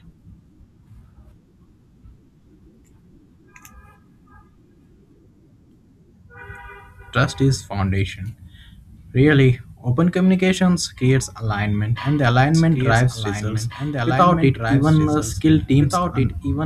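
At 12.55 s, right after "creates alignment and the", a doubled audio track cuts in abruptly and runs to the end. A dry, full-band copy trails about two seconds behind, a few dB quieter, likely from a second, slower capture path.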